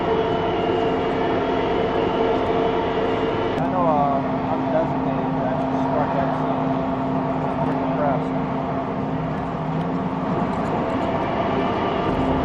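A second, late copy of the signal gets mixed back in, most likely from a slower capture path or an edit that left two copies out of step. The result is a doubled audio track from 10.27 s to the end: the full-band sound repeats roughly 400 ms behind itself at about the same level as the original. It cuts in abruptly, with no decay or room colour on the copy, so everything after that point is heard twice.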